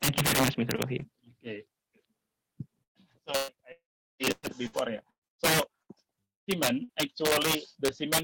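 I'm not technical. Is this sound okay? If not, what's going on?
No, there are a few real problems here, mostly the kind you get from a shaky internet connection.

Integer overflow runs through the whole clip. Whenever the sound gets loud, the level is pushed past the highest number the system can store, and instead of stopping there it wraps around to the opposite extreme. A small share of the loudest moments are affected, and each one comes out as a sharp, nasty crack, much harsher than ordinary distortion.

There are three bursts of packet loss, at 2.83 to 2.98 s, 3.37 to 3.51 s and 6.84 to 6.92 s. In each one a short chunk of audio, about 120 ms in the first two and about 60 ms in the last, never arrived. The receiver filled the hole by stretching out what came before, or, in the first one, mostly with silence. Then the sound jumps ahead with that piece gone.

The two longer gaps, from 3.72 to 4.23 s and from 6.25 to 6.51 s, sound like a long network dropout, likely caused by the connection cutting out completely for a moment. 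The first loses about half a second. A brief trailing-off fill gives way to silence for most of it. The second loses about a quarter of a second and is silent the whole way through. Afterwards the sound picks up further along, with that stretch missing.

Between 4.32 and 5.92 s there's repeated packet loss (robotic sound). Six small holes land close together, the longest about 114 ms, and roughly a third of that stretch is patched-over filler. This makes the sound choppy, with bits missing throughout.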